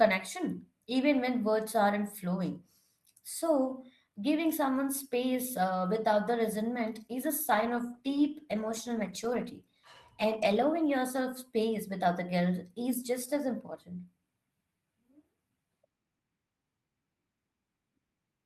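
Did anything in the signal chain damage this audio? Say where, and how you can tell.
Yes. A call bitrate drop in the codec stage, driven by the network's bandwidth estimate, degrades the speech from 7.50 s to about 10.75 s. The voice turns coarser and rougher, sitting at its worst for about 3.2 s before clearing, which fits an encoder pushed from roughly 32 down to 18 kbps. Unlike packet loss, the sound never breaks into gaps, clicks or repeated fragments. The degradation is continuous across the span, then recovers.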